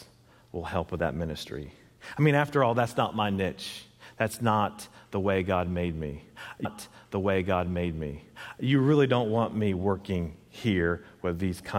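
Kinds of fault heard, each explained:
Stream segment repeated: a chunk was queued twice, so about 2.0 s after "made me" replays; the waveform and spectrogram show an identical block back to back.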